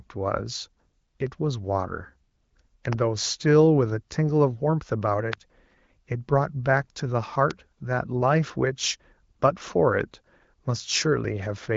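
Speech carried over the AMR wideband (HD Voice) codec, with nothing above 7.5 kHz, is hit by three loud pops at 2.93, 5.33 and 7.51 s, likely voltage spikes from a switch, plug or static, each a single sharp crack some 15 dB above the speech, which carries on underneath.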